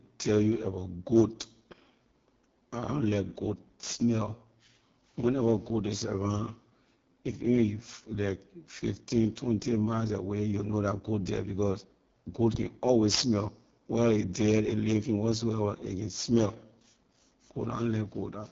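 Throughout, the speech carries heavy AMR wideband (HD Voice) codec damage, raspy and rough, which fits its lowest 6.6 kbit/s mode; spectrograms show smeared harmonics and nothing above 7 kHz.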